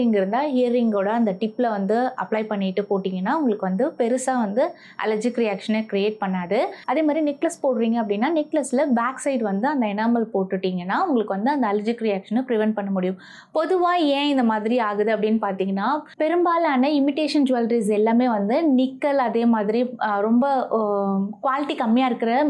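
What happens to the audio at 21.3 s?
Nothing goes wrong at 21.3 s; the audio plays through that moment intact, with no dropout, click, distortion or other fault.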